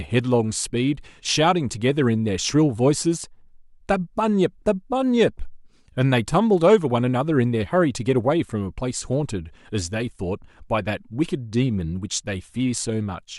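Listening to the speech recording, nothing stood out as a technical problem at any point.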